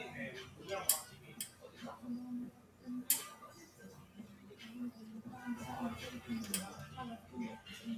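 A noise suppressor designed for speech was left running on this non-speech sound, so it treats steady, sustained content as noise and pulls it down while sudden onsets pass. Its gain therefore rises and falls by roughly 10 dB across the whole clip, which makes the sound pump and flutter, with sustained parts and decays thinning out instead of holding a stable level.

The suppressor also mistook specific stretches of the sound for noise and turned them down harder than the rest, producing a sound cut by the noise suppressor four times. From 1.1 to 1.8 s the level sinks by up to about 7 dB for around half a second. From 2.5 to 2.86 s it dips by up to about 8 dB. From 3.59 to 4.56 s, the longest cut, it drops by up to about 8 dB for most of a second. From 7.18 to 7.34 s a brief dip of about 7 dB pulls the sound down.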